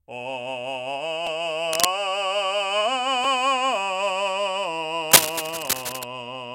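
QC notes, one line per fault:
1.27 s and 3.24 s, repeated buffer: each time a 5 ms slice of the music plays twice because fresh audio missed its deadline and the device reused the previous block. With so short a buffer, the hard joins come across as a brief click rather than an audible stutter.
1.71 to 1.88 s and 5.11 to 6.04 s, cable scratch noise: dense, irregular crackling bursts sit roughly 5 dB above the music, heard as scratching over it. The likely cause is a worn cable, connector or control being moved, its contact resistance fluctuating rapidly.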